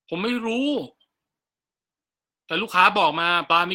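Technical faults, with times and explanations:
Throughout: clock drift between sender and receiver. The sending side's sample clock runs roughly 4 percent slower than the receiving side's, so audio arrives more slowly than it is played out. The jitter buffer keeps draining toward empty, and the receiver has to fill the shortfall continuously. This steady mismatch drives the timing problems across the whole speech clip.
0.00 to 3.53 s: repeated timing corrections. To keep pace with the slower sender, the receiver repeatedly duplicates short slices of audio at uneven intervals, always lengthening rather than trimming. The net playback rate settles at 96 percent of normal, and over this stretch the inserted material adds up to roughly 150 ms. Each insertion is small, so if heard at all, the result sounds like slight hiccups and a subtly dragging, uneven tempo.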